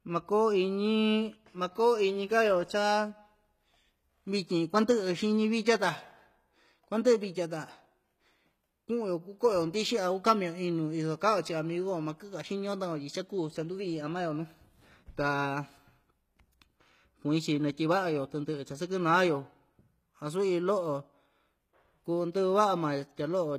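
From start to finish the speech carries plainly audible HE-AAC compression damage, likely from a low bitrate around 20 kbps. The treble is rebuilt from copied lower bands, so s sounds come out gritty and metallic, and nothing sits above 14.9 kHz.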